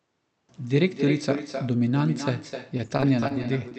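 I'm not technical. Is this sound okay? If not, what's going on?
No. Two problems can be heard.

The first is echo with no canceller, and it runs through the whole clip. The far end is playing the call through a loudspeaker, and its microphone picks that sound up again. Nothing removes it, so it travels back. Every bit of speech is followed by a quieter, hollow copy. That copy arrives roughly a third of a second late.

The second is repeated packet loss, which makes the speech sound robotic. It starts at about 2.77 s and lasts until about 3.73 s, near the end. Small pieces of the sound went missing over and over. Each gap is very short, the longest about 21 thousandths of a second. The call software fills each hole by stretching the last sound. About an eighth of that stretch is patched this way. The result sounds choppy.

The speech came through an internet call, and its high frequencies stop at about 8 kHz.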